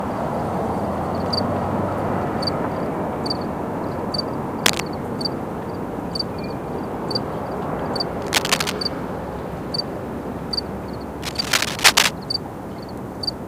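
At 4.63 to 4.80 s, 8.21 to 8.72 s and 11.22 to 12.13 s, bursts of cable scratch noise rustle over the sound, a bit louder than it. That's likely a worn cable or connector being moved, its contact flickering and spraying uneven noise into the signal.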